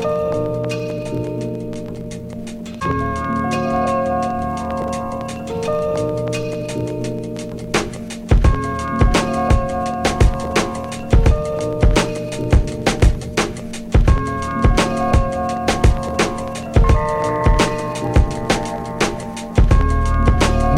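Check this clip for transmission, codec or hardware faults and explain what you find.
Nothing stood out on listening.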